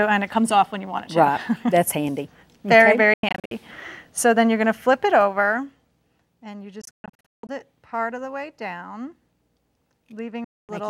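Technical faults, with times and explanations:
3.14 to 3.51 s, 6.81 to 7.49 s and 10.44 to 10.69 s, Bluetooth dropout: the sound cuts out in choppy holes, about 0.24 s, 0.49 s and 0.24 s lost, longest gaps 93 ms and 168 ms, then resumes as if it had kept playing, likely packets arriving too late.
4.83 to 6.31 s, zipper noise: the level drops by roughly 10 dB in coarse steps rather than a smooth ramp, around 15 steps a second, so each jump adds a small click and you hear a ticking zip riding on the sound.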